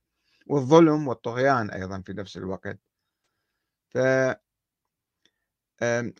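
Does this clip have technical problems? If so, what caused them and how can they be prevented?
Yes. At 3.18 to 3.26 s the speech smears into a brief noisy, phasey patch. This is AAC frame loss with concealment: the decoder patched the 85 ms gap, which fits two lost frames, from the last good spectrum. Carrying the stream over a protected link with forward error correction or retransmission would prevent it.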